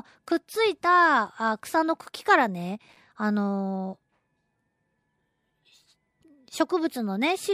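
A speech recording with a burst of processor overload crackle from 2.89 to 2.97 s. For about 80 ms the audio processing falls behind and misses several buffer deadlines in a row, with each missed block, apparently around 5 ms long, coming out as silence. The waveform shows a cluster of short flat-line gaps with abrupt edges, and the spectrogram shows a tight group of thin vertical broadband stripes where those hard cuts create clicks across the whole frequency range.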